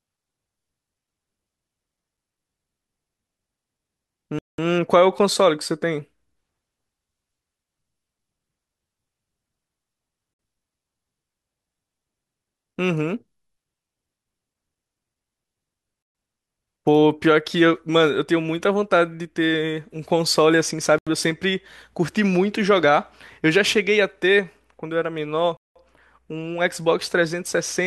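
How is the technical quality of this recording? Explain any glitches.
The speech is interrupted five times by brief dropouts to complete silence, at 4.39–4.58 s, 10.34–10.39 s, 16.03–16.15 s, 20.98–21.07 s and 25.57–25.76 s, lasting between 56 and 197 ms. These are likely Bluetooth stalls: interference delays packets, the receiver's buffer empties, and playback halts until retransmissions arrive. Each gap is heard as a sudden hole in the speech. On a waveform the trace drops flat to silence, and a spectrogram shows clean vertical blank bands spanning every frequency.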